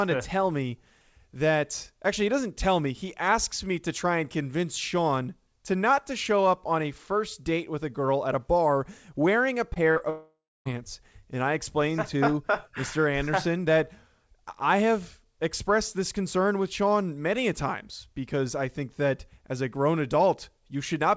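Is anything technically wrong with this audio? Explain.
Yes. The speech carries two kinds of network fault, both heard through a call codec whose sound fits G.722, with nothing above 8 kHz.

Short concealed packet loss occurs at 9.74–9.78 s, 9.92–9.98 s and 9.98–10.02 s. Packets arrived too late for the decoder, which extended the preceding sound to cover each gap of 20 to 40 ms before blending back. The result is brief smears and wobbles clustered around the 10-second mark.

A long network dropout, likely a stretch where no packets arrived, follows at 10.10–10.67 s. The last sound is drawn out as a fading buzz or hiss, then about 0.29 s of silence, before speech resumes at 10.67 s with the missing portion simply gone.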